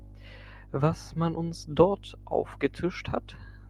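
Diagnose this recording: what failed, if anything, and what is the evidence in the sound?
Nothing in the chain seems to have failed, since the recording gives no sign of trouble at any stage from capture to playback.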